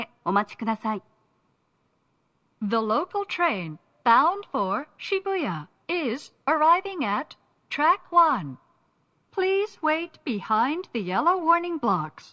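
Nothing here jumps out as a technical problem; the audio rolls along steadily with no glitches, dropouts or odd artefacts to point to at any moment.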